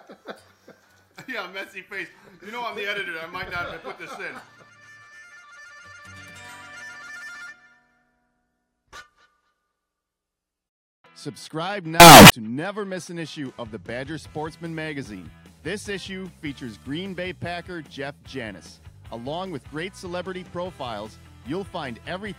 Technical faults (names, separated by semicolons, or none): signed and unsigned mixed up